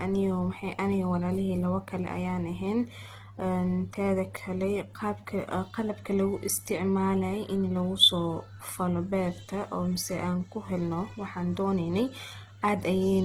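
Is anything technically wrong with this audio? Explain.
Yes. The whole clip shows Opus compression, likely in music mode at a rate fitting 16 kbps. Starved bands get noise-filled, so the speech sounds rough and grainy.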